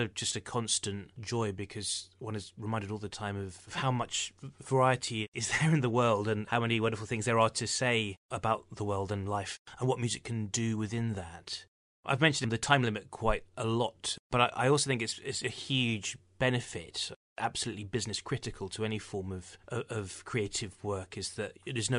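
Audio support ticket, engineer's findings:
No faults found in the speech signal on listening; nothing identified for any component to account for.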